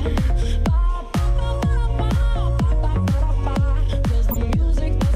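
Damaged compressed frames reached the decoder and were played as corrupt frame decoded events, putting misplaced energy into the spectrum: a brief, fairly quiet glitch at 2.21 s across a few frames, then a much louder glitch from 4.31 to 4.37 s spanning a couple of frames.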